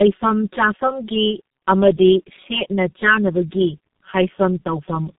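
One channel of this speech recording arrives roughly 5 ms behind the other, and summing them to mono cancels their shared content at regularly spaced frequencies starting near 100 Hz. Throughout the clip this channel delay (comb filtering) leaves fixed notches that make the sound hollow and phasey. The call also passed through tandem speech coding, decoded and re-encoded at each link, with two low-rate speech coders in sequence, a pattern that fits a G.729A stage followed later by G.723.1 at 6.3 kbit/s. Each coder builds on the previous one's errors, so the speech is rough, muffled and warbly from start to finish, with nothing above 3.8 kHz.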